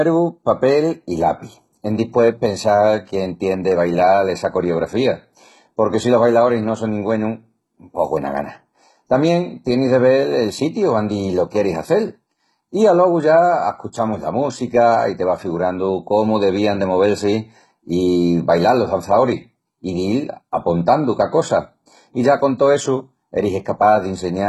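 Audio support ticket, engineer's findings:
Speech treble gritty and lispy start to end, s sounds metallic, nothing above about 11.8 kHz. Likely HE-AAC compression at a very low bitrate, maybe 16 kbps: upper band rebuilt from copied lower bands, so harmonics don't line up. Heavy damage.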